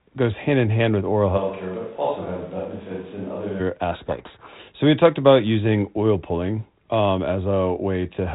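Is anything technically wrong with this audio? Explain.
Yes. There are two faults.

From 1.39 to 3.59 s, the sound turns roomy and hollow. It loses bass and drops about 5 dB. Background noise rises to around 25 dB below the speech. The likely cause is a switch to a distant microphone, after the close one dropped out.

From 3.92 to 4.59 s, the speech is buried in harsh, grinding distortion. This is a codec payload misread. The decoder reads each G.726 code word in the wrong bit order, so most steps it decodes are wrong.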